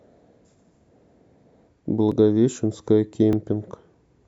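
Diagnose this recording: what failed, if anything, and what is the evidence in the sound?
Small skips in the speech at 0.74, 2.12 and 3.33 s: likely dropped buffers (overrun), with the driver losing roughly 5 to 15 milliseconds of unread samples.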